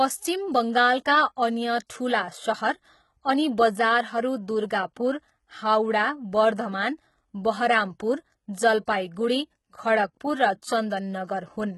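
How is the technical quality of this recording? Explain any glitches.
The recording is clearly degraded by heavy HE-AAC compression across the whole speech clip. The upper spectrum sounds synthetic: s sounds come out gritty and lispy, with a metallic sheen that doesn't follow the voice's harmonics. That points to the treble being likely rebuilt by spectral band replication from copied lower bands, consistent with a very low bitrate around 16 kbps. On a spectrogram, the top band looks smeared and blocky, with misaligned harmonics above the crossover and nothing above 11.8 kHz.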